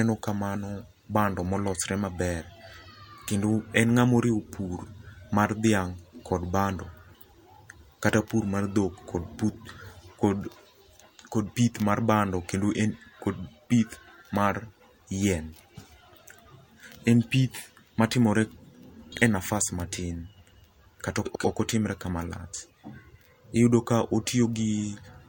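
Three spots have frames out of order: 19.12 to 19.22 s, 21.25 to 21.45 s, and 23.32 to 23.38 s. In each, two adjacent blocks (roughly 46, 93 and 23 ms) got swapped, so the speech briefly flutters without losing any time.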